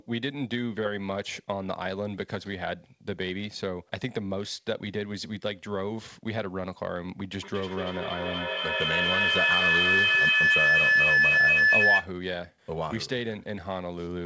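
At 7.36 s a feedback howl starts in the speech and runs to 12.14 s. A microphone is picking up a loudspeaker on the same call, and each trip round that loop comes back louder. The sound narrows to a tone near 2 kHz, with the loop coming round about every fifth of a second. At its peak it sits about 10 dB above the speech. Above it, the call audio stops at 8 kHz, which fits a G.722 codec.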